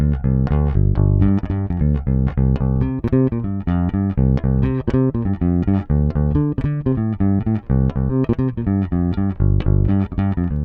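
The audio jumps forward three times, at 2.29 to 2.31 s, 5.27 to 5.30 s and 8.09 to 8.14 s, losing roughly 200 ms, 70 ms and 100 ms. These are compressed frames skipped, which fits 20 ms codec frames.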